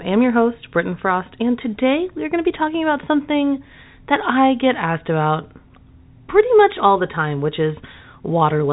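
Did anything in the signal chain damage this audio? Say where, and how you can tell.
No, nothing damaged it.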